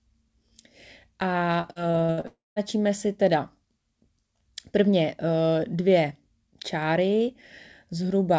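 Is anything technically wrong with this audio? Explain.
Yes. From 1.61 s to 2.27 s the speech turns choppy, with six short breaks, the longest about 60 ms, and roughly a third of that stretch smeared or hollow. This is repeated packet loss with the robotic sound it produces. Audio packets kept failing to arrive in time, and each hole was filled by extending the previous sound. Because the holes came so close together, those repeated patches give the voice a choppy quality with pieces missing.

Straight after, from 2.27 s to 2.59 s, the sound stretches into a fading buzz or hiss for a moment, then drops to about 180 ms of silence. Speech returns at 2.59 s with roughly 0.3 s missing. The likely cause is a long network dropout. Nothing reached the receiver for that stretch, so it first prolonged the last sound and, once that ran out, could only play silence until audio resumed. Throughout, the G.722 call codec leaves nothing above 8 kHz.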